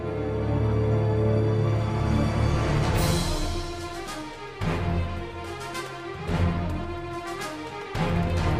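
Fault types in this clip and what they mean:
No faults can be heard anywhere in this audio.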